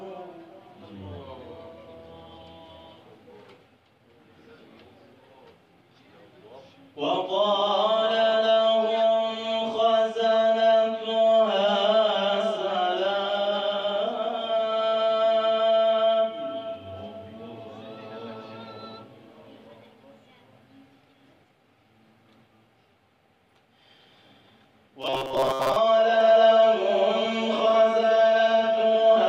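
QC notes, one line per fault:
25.02–25.77 s: robotic sound from repeated short buffers. The sound turns into a stiff, metallic buzz pitched at 133 Hz that only loosely tracks the underlying audio. The likely cause is new audio arriving too late, so playback keeps re-emitting its last block of roughly 7.5 ms, one period of the buzz, while the audio due in that time is dropped. Most of the span is repeated material, and the fixed repetition rate imposes that constant pitch.
26.21 s to end: doubled audio track. A second full-band copy of the same sound runs around 150 ms behind the original, about 5 dB quieter, and continues to the end of the clip. It comes in abruptly, with no gradual build, and carries no decay or room colour, so it reads as a flat slapback rather than an echo. This is likely the same signal reaching the mix twice, once through a slower path.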